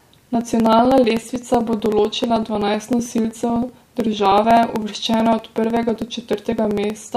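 From 0.10 to 7.09 s, periodic USB or driver dropouts skip about a millisecond every 0.063 s. The evenly spaced ticks, heard only under speech, distinguish them from random crackle.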